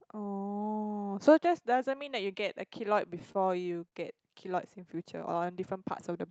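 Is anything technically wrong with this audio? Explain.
Yes, there are two faults in this speech.

Repeated stalls (stutter), 3.19 to 3.94 s: late packets emptied the jitter buffer five times, and each gap, at most 35 ms, was filled by continuing the last sound. The speech drags and stutters there.

Jitter buffer slow-down, 5.04 to 5.53 s: the buffer rebuilt its reserve by repeating pitch periods, adding 50 ms. The speech plays at 91% speed with the same pitch, sounding drawn out.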